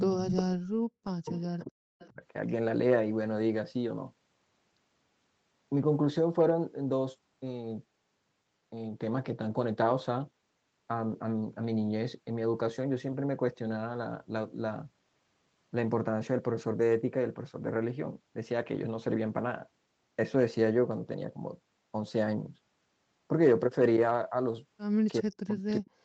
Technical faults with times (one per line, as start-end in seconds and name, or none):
0.00-2.22 speech suppressed in double talk
0.21-0.42 echo leak
1.27-1.44 echo leak
2.00-2.09 echo leak
25.21-26.05 speech suppressed in double talk